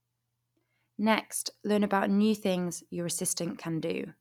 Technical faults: none

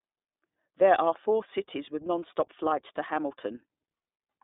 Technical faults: iLBC codec

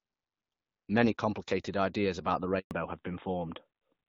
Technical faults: handover gap; fallback to narrowband

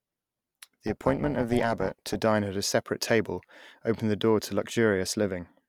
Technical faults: overlap-add ripple

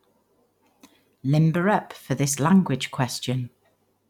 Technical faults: none

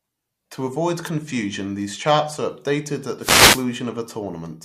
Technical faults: wireless microphone noise hit

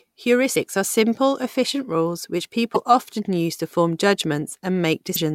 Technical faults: damaged data in a compressed stream

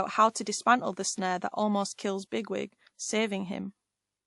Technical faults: transcoding between lossy codecs

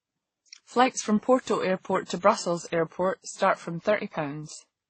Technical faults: transcoding between lossy codecs

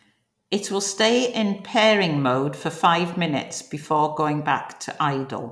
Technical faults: none

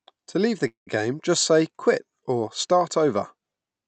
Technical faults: call audio freeze

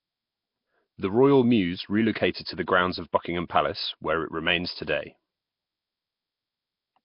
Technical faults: Nellymoser compression

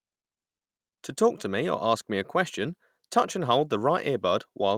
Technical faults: none

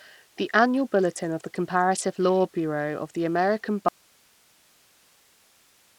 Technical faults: Bluetooth SBC compression; audio dropout to a faint residue

